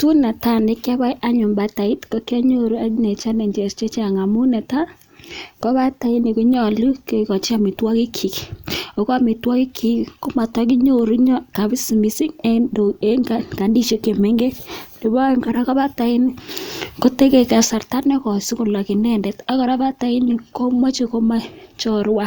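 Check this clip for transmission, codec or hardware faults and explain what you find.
There's one fault here, a sudden gain jump. From 16.49 s to 17.65 s the whole speech clip steps up by about 6 dB with no fade in, then drops back just as abruptly. Because the level changes from one sample to the next, the speech and the background noise get louder together. That's the tell that it's a digital gain setting and not the talker. The likely cause is a gain change or bit shift applied without any ramp.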